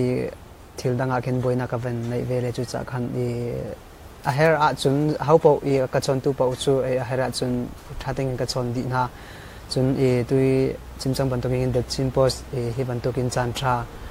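Nothing stood out as a technical problem on listening to the clip.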